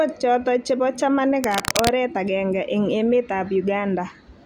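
It's a short speech recording, and from about 1.43 to 1.92 s there's a burst of cable scratch noise: dense, uneven scratching and rustling sitting only a few dB under the speech. That's likely a worn cable or connector being moved, its contact resistance jumping about.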